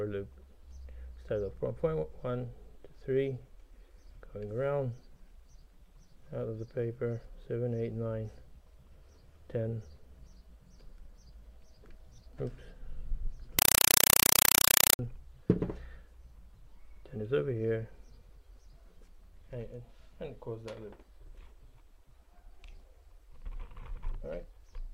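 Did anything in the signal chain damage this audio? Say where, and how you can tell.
Yes. From 13.59 to 14.99 s, a compressed stream played as audio replaces the sound at the playback link. An undecoded AC-3 bitstream is read as samples, giving loud chattering static. The waveform shows 4 ms bursts at 31.25 Hz between zero padding, and the spectrogram shows broadband vertical stripes.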